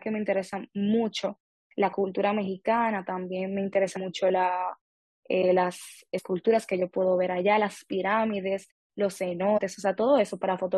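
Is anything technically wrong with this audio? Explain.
Yes. The speech has damaged data in a compressed stream, heard three times: at 3.96 s, from 6.17 to 6.19 s, and from 9.57 to 9.59 s. Each is a brief chirp or blip lasting about 20 ms. Some bytes in the encoded stream were corrupted. The decoder could not read those frames cleanly, so it lost sync and searched ahead for a valid frame header. The quiet stretches between phrases fade to silence as intended.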